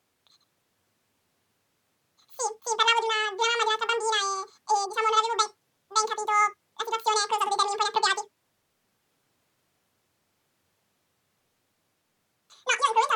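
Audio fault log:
throughout, audio read two samples at a time (double speed): pairs of samples are taken as one frame, so the speech plays twice as fast and a full octave (12 semitones) higher.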